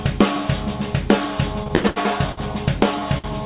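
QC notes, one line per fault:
1.64 to 2.39 s, repeated stalls (stutter). The sound catches and drags five times in this span. Packets came in late, so the jitter buffer kept running dry. Each time, the receiver held the last sound on until data arrived. About 250 ms was filled this way, roughly a third of the span. The longest hold is 86 ms, long enough to fade. Nothing is lost, but the flow stutters.
3.18 to 3.26 s, short stall from a late packet. One packet arrived about 56 ms behind schedule. The jitter buffer emptied, and the receiver stretched the last sound for those 56 ms. It then resumed from the same point, so no audio is missing. The result is a sound held slightly too long, with a faint buzz or dip. The band-limited call sound, with nothing above 4 kHz, fits G.711 mu-law at 64 kbps.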